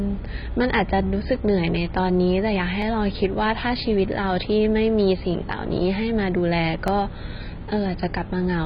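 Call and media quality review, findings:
Dull, smeared speech throughout, with a warbly, fizzy edge on sibilants and held vowels. Heavy codec damage, likely AAC compression at a low rate, which fits something around 16 kbps. The encoder drops the cut-off and starves bands, leaving holes or noise fill.

Single sharp click at 2.82 s. Likely dropped samples: a fraction of a millisecond missing, so the waveform jumps to a later value and leaves a thin vertical line across the spectrum.

Same click again at 6.88 s, same dropped samples signature, again only a tiny gap. Too short to lose any sound, just the discontinuity. Worth checking the buffer handoff between capture and encode.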